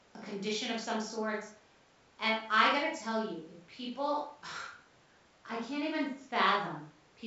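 No technical faults can be heard in this speech recording. It carries G.722 wideband telephone coding, with the audio band ending near 7.7 kHz and at most a faint trace of coding noise, which fits the full 64 kbit/s mode.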